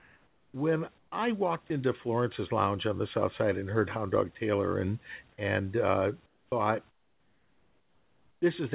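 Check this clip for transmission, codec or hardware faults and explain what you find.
The speech shows discontinuous-transmission faults at pauses and edges of sound, heard through a narrowband call path with nothing above 4 kHz, which fits G.711 mu-law at 64 kbps. Room noise sits about 38 dB below the speech.

Comfort noise in place of the background, at 0 to 0.54 s, 0.98 to 1.12 s, 6.26 to 6.52 s and 6.9 to 8.42 s. The sender likely stopped transmitting during pauses, leaving the receiver to synthesise noise. The real background becomes a flat, featureless hiss, about 3 to 9 dB quieter.

Onset clipped by the voice detector, at 0.51 to 0.54 s. The detector was likely slow to register that sound had resumed, so the first 30 ms were never sent and comfort noise stood in for them. The sound starts abruptly, without its soft lead-in.

Sound dropped by the voice detector, at 1.68 to 1.70 s. 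The detector likely mistook a brief stretch of sound for background and halted transmission. About 20 ms of real sound gives way to steady synthetic noise before it returns.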